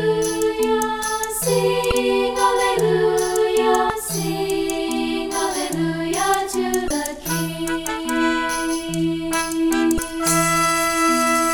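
Four short hits of damaged data in a compressed stream, at 1.88 to 1.92 s, 3.87 to 3.90 s, 6.87 to 6.91 s and 9.96 to 9.99 s, each lasting about 30 ms. At each spot some of the coded bytes are corrupted, so the decoder misreads those frames, loses its place and has to hunt for the next valid frame header. You hear that as a quick chirp, squawk, click or short hole cutting through the sound before it settles again.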